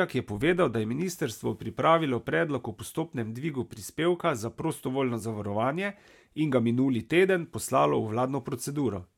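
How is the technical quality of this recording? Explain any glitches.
The technical quality of this recording is sound, with no glitches to explain.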